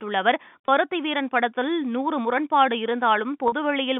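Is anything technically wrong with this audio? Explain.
Yes. There is packet loss with pitch repetition at 0.67 s and from 3.48 to 3.52 s. Lost audio, about 20 ms and then 40 ms, was bridged by repeating the last pitch period, giving a brief held, buzzy tone over the narrowband G.711 telephone signal.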